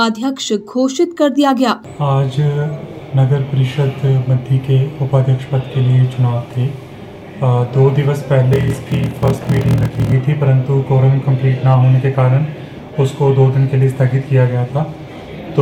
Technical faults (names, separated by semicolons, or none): block size mismatch (padded)